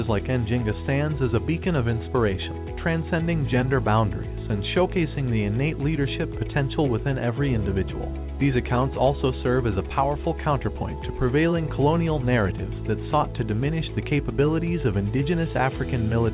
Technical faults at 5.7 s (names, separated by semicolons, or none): none